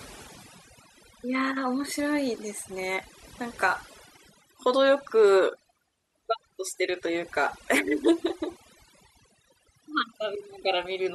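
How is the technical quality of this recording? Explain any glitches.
The recording suffers from overdone noise removal, present throughout. A noise reduction stage was set far too aggressively: it pulls individual frequency bands down hard, or mutes them outright, whenever they sit close to its picture of the background noise, and the quieter parts of the speech get caught in that net. The gaps between phrases collapse into near silence sprinkled with twinkling, chirpy specks.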